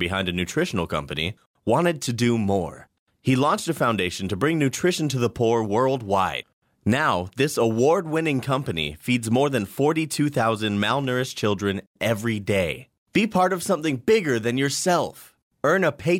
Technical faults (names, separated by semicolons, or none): none